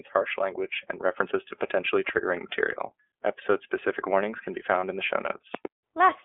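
Throughout, the speech carries the sound of the iLBC codec. Bandwidth is confined to roughly 250 Hz to 3.4 kHz, and the rough, slightly synthetic texture comes from the codec rebuilding each frame's excitation independently. The character fits the 13.33 kbps mode with 30 ms frames.

At 2.09 to 2.11 s a single loud pop sits about 15 dB above the speech. It is a sharp transient, likely from a voltage step such as a plug, switch or static discharge, and the speech continues beneath it.

At 4.80 to 4.83 s one iLBC frame is lost, about 30 ms. The decoder fills the gap by repeating the last pitch cycle mixed with noise, so it sounds like a brief held, buzzy vowel. The voice recovers immediately because the frames stand alone.

At 5.55 to 5.67 s a loud pop occurs again, this time as two pops in quick succession, peaking about 15 dB above the signal, with the speech running on underneath.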